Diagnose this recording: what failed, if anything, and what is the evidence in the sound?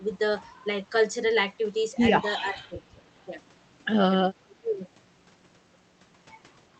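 Call processing: speech suppressed in double talk. Speech drops about 20 to 25 dB at 2.48–2.96 s and 4.43–4.86 s. The echo canceller likely turned down its own talker along with the loudspeaker echo.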